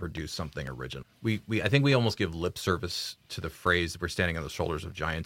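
Speech, interrupted by periodic USB or driver dropouts from 0.17 s to 5.17 s: every 0.25 s, about a millisecond of audio is lost and filled with silence, giving roughly twenty evenly spaced ticks that are audible only where the voice is present. On a waveform these show as tiny flat gaps at a steady spacing; on a spectrogram, as thin vertical broadband lines in a regular row, the signature of a background task stalling the bus or driver.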